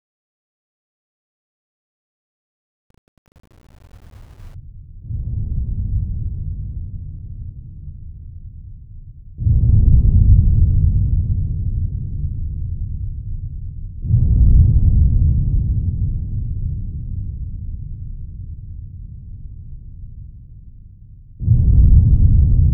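From 0.0 to 4.54 s, the fade-in shows truncation distortion: its quiet part was requantised, consistent with roughly 8-bit resolution and no dither. Up to 4.2 s it sounds gritty. The waveform shows stair-stepped blocks, and the spectrogram shows broadband hash.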